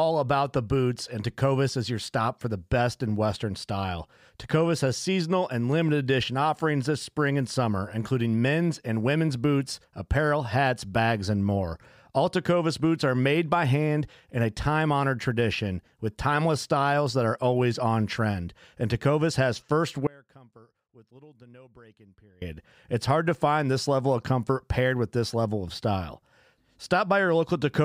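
Speech that cuts out abruptly at 20.07 s and returns at 22.42 s, leaving only faint sound, roughly 25 dB down, for about 2.35 s. This audio dropout to a faint residue likely comes from the signal path breaking while the downstream input stayed live.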